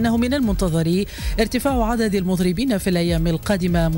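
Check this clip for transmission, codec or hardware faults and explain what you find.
A video or display buzz runs through the whole clip. A screen or video cable is coupling into the audio path, injecting a buzz at the 50 Hz field rate with hash above it, plus a thin whine at the 15.6 kHz line rate, sitting roughly 25 dB below the sound.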